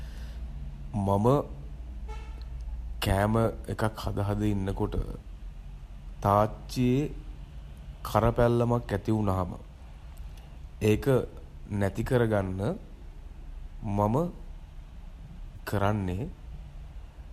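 At 15.56 s to 15.59 s the speech has a brief smeared, noisy and phasey patch, the mark of AAC frame loss with concealment. About 20 ms of coded audio went missing, which fits two lost frames of the short kind used by low-delay AAC, likely AAC-ELD here. The decoder rebuilt the gap from the preceding spectrum with randomised phase, so the sound blurs rather than dropping out, then picks up again.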